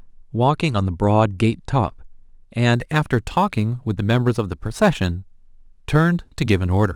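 From 2.74 s to the end, the speech carries a crude rate conversion. Samples were simply dropped to change the rate, with no filtering. The skipping pattern fits a conversion from 48 kHz to 44.1 kHz. Each dropped sample leaves a small step in the waveform. These steps recur on a fixed cycle and create tones unrelated to the speech. The error sits roughly 30 dB below the signal. It is heard as a gritty, inharmonic fizz riding on the louder and brighter sounds.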